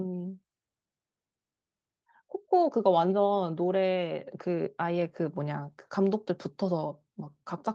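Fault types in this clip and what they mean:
Nothing stood out on listening to this speech recording.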